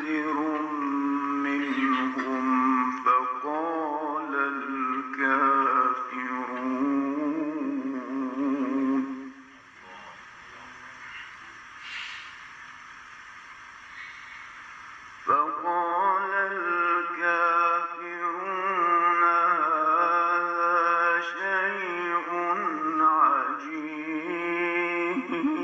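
Nothing in this audio stands out as a technical fault, so there's nothing here to flag.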